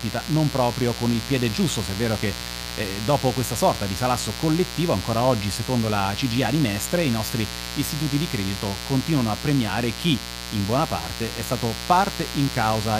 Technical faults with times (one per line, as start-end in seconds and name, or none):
0.00-12.99 mains buzz